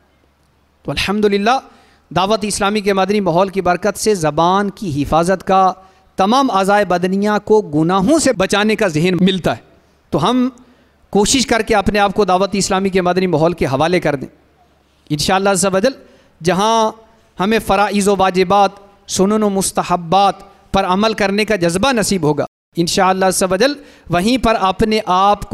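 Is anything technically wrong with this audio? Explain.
Yes. From 22.47 to 22.73 s there is a playback stall: the player likely ran short of data, so output drops silent for about 0.26 s before the sound resumes.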